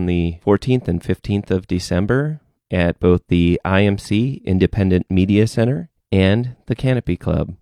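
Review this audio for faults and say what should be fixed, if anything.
Nothing needs fixing here; I listened closely and there's no fault anywhere in it, so you can leave it as it is.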